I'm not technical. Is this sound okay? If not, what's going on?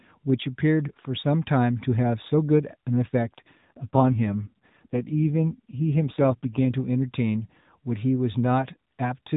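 No. From 3.22 to 6.71 seconds, an AMR rate drop makes the voice rougher and more robotic as the phone network spends fewer bits on it. It never cuts out or turns muffled.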